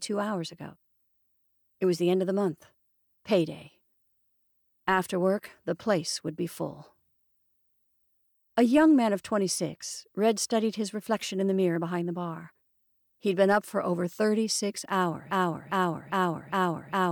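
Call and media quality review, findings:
Broken-record loop, 15.31 s to end: 0.40 s fragment repeats four times back to back. Likely stalled player or stream resending last buffer; intended audio lost.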